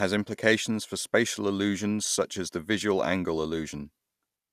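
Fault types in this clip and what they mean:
Generation loss: the speech sounds swirly, smeared and hollow, with blurred consonant onsets and nothing above 15.9 kHz, which points to an MP2-type codec near 128 kbit/s. The build-up of noise likely comes from around seven re-encodes on shifting frame grids.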